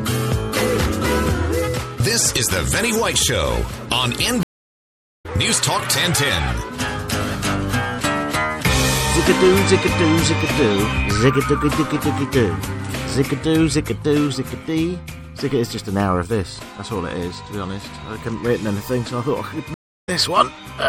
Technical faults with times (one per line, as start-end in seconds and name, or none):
0.00-20.89 MP3 compression
4.43-5.26 stream reconnect
19.74-20.09 stream reconnect